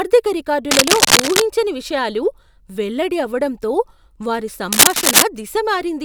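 A speech recording with cable scratch noise: dense, uneven scratching bursts, a few decibels above the speech, from 0.71 to 1.42 s and 4.72 to 5.23 s, likely from a worn cable or connector being moved.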